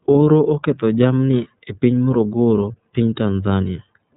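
From start to finish the speech sounds dull and boxed-in, with nothing above about 3.8 kHz, and it carries a plainly audible rough, slightly synthetic edge. This is the iLBC codec at work: a narrowband VoIP coder that discards the upper band and rebuilds each 30 ms frame's excitation independently of the previous one, so small discontinuities roughen the sound. The 30 ms framing fits iLBC's 13.33 kbps mode.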